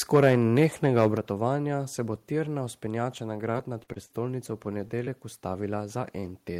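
From 0.14 to 1.07 s the loudest syllables turn harsh and crackly. The waveform tops look flattened, with about 3 percent of samples clipped and peaks pushing roughly 6 dB past the limit. The likely cause is microphone overload: the input gain was set too high, so the converter ran out of headroom and sliced off each peak. That squared-off edge is the crackle.

At 1.17 s the whole signal, speech and background alike, drops by about 5 dB in a single step. It comes right after the distorted opening. This is a microphone volume step-down. The software likely sensed the clipping and cut the device's input level at once. The step is abrupt and not faded. The level then stays lower.

Right after "bo tirna vzpenjača na", from 3.51 to 4.19 s, the speech turns choppy. This is repeated packet loss with a robotic sound. Five gaps land close together. The longest runs about 40 ms. Each one is patched by stretching the last sound forward. 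About a fifth of the stretch is synthetic fill, and the fills follow each other so fast that the speech never settles.

Two brief blemishes follow, from 5.05 to 5.08 s and from 6.20 to 6.24 s. Each is short concealed packet loss. About 20 ms of audio went missing and was bridged by extending what came just before, then blended back into the real signal. Each heals quickly and is heard as a small smear or wobble in the speech.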